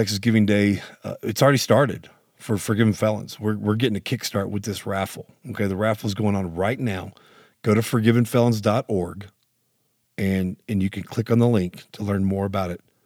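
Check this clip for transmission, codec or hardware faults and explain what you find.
No faults turn up in this clip.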